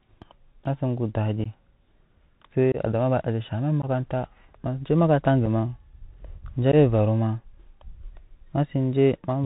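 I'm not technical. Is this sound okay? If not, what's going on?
No. Throughout, the speech sounds thin and muffled, like an old phone call, with a grainy hiss underneath and scratchy s sounds. That's the Bluetooth CVSD headset codec, a basic headset format that discards all the higher frequencies and roughens loud, sharp sounds.

There are also five tiny dropouts, each a brief gap or click: 1.44–1.47, 2.72–2.77, 3.82–3.85, 5.46 and 6.72–6.74 seconds. That's unconcealed Bluetooth headset packet loss. Small chunks of sound never arrived from the headset, and nothing filled in the holes.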